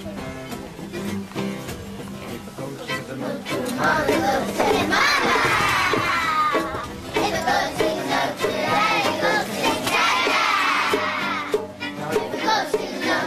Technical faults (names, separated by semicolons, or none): none